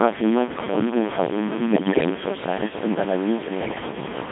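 From start to finish the speech carries a coarse, gritty grain that moves with the sound. It sits not far below the voice, and quiet passages sputter between a few levels. This is likely low bit depth without dither, truncated to about 4 bits. A waveform would show visible staircase steps, and a spectrogram would show harsh, signal-following noise smeared across the band.

Throughout, the speech is also robotic and buzzy, the sound of the Codec 2 vocoder. It rebuilds the voice from pitch, voicing, energy and a spectral envelope rather than keeping the waveform. The heavy damage fits its 2.4 kbit/s mode. A spectrogram shows content confined to roughly 150 Hz to 3.6 kHz, with rigid, comb-like harmonics.

From 1.72 to 2.10 s, bit errors on digital voice radio break the synthetic voice into warbles, bleeps and gibberish, with sudden jumps in pitch, level and tone. The errors land on parameters that each shape a whole vocoder frame, and the sound points to a high error rate across a run of frames. 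A spectrogram shows erratic blocks of mismatched harmonics and a jagged, stepping level.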